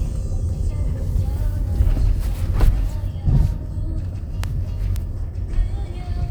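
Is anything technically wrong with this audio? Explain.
Yes. At 4.96 s there is a bit error spike: a single flipped bit in memory or on a digital link pushed two consecutive sample values off by a power of two before they snapped back. It sounds like one sharp, broadband tick reaching about −11 dBFS, unrelated to the surrounding sound.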